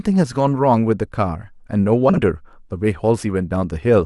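From 2.09 to 2.21 s the speech has frames out of order: two adjacent blocks of about 40 ms each, consistent with two-frame runs, were decoded swapped. It sounds like a brief garbled flutter. Unlike a dropout or repeat, nothing is missing or doubled.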